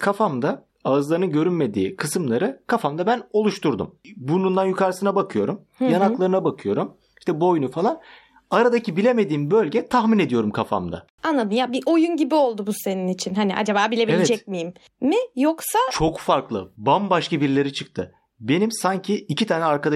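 At 16.08 s the speech shows an underrun with held sample: the output briefly ran dry, holding its last value flat for 0.67 ms, then resumed without lost audio, giving only a faint tick.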